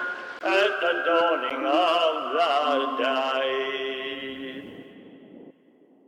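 Music with two blocks of digital silence, at 0.39 s (20 ms) and 1.5 s (10 ms), likely from the output buffer not being filled in time. Unlike a fade or concealed dropout, the sound drops to silence with no ramp, so the first gap is a short hole and the second a tick.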